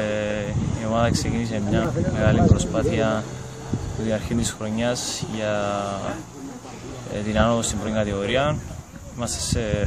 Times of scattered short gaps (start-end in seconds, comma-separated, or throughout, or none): none